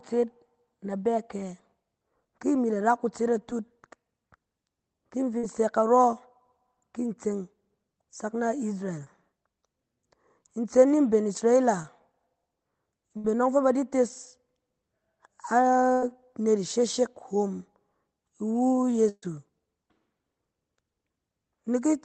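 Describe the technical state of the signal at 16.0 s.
A burst of packet loss spans 15.92 to 16.03 s: the receiver extends and fades the preceding sound for about 100 ms, then the speech resumes with that stretch missing.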